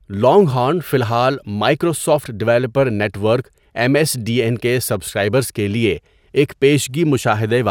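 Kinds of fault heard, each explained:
Nothing stood out on listening to the speech that would mark a technical problem.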